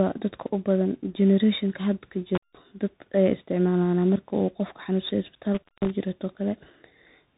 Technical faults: tandem speech coding; intermittent contact

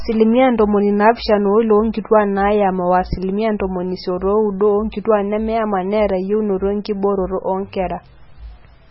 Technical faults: MP3 compression

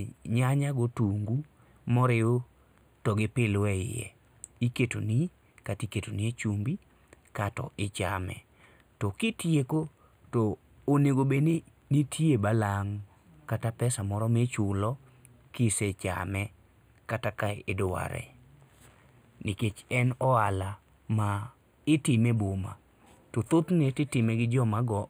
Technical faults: channel delay (comb filtering)

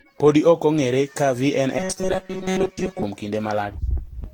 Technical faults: generation loss; robotic sound from repeated short buffers

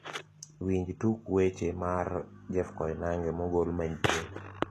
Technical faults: HE-AAC compression

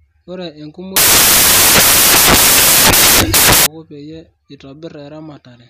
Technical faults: samples built from the wrong bytes

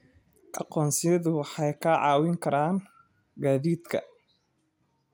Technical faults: generation loss

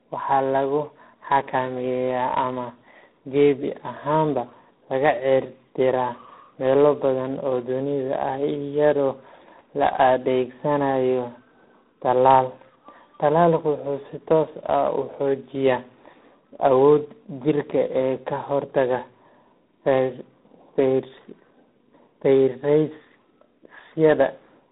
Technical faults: tandem speech coding

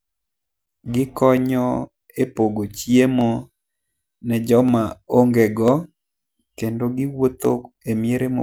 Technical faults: dropped samples

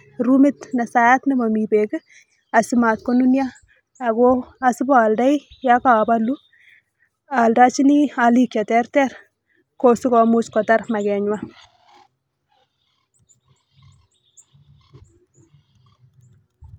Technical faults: none

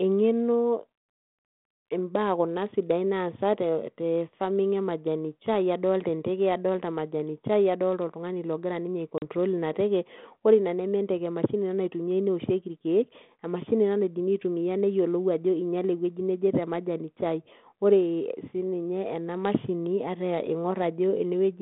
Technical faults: packet loss on an ADPCM call

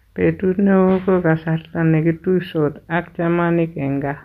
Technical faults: none

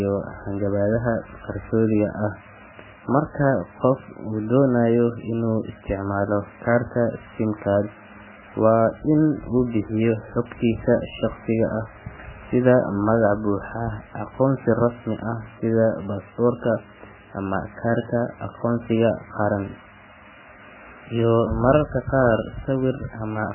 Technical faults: MP3 compression

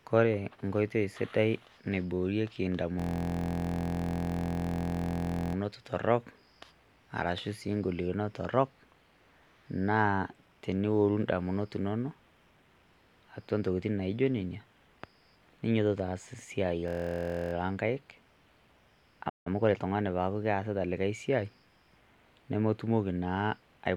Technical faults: system hang loop; playback stall; time-compressed catch-up

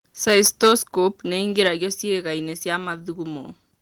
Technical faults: microphone overload; microphone volume stepped down

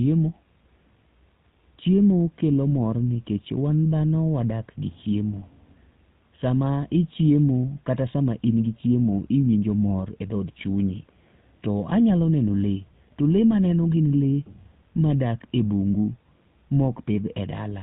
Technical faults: GSM full-rate codec

